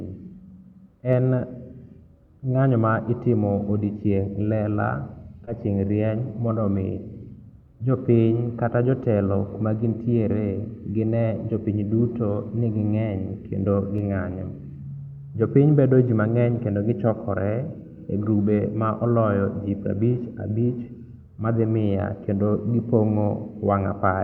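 At 1.13 s the waveform's zero line jumps in a DC step, heard as a low thump, then steps back at 13.98 s. Unlike a dropout, the speech continues unchanged. At 5.45 to 5.49 s, short concealed packet loss leaves a 20 ms hole, 15 ms of it patched by extending the previous sound. The result is a brief smear rather than the hard silence of a dropout.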